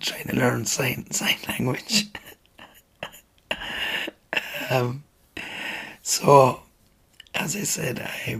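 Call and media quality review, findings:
No faults found: the signal shows no dropouts, distortion, level jumps or timing irregularities anywhere in the clip.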